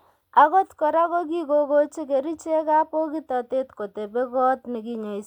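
Nothing stood out as a technical fault on listening to this speech recording.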